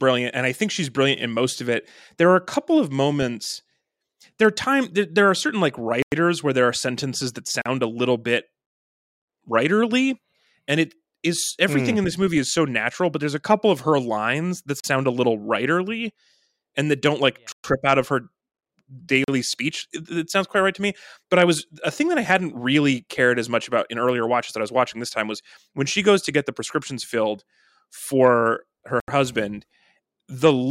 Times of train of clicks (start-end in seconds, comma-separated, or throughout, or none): none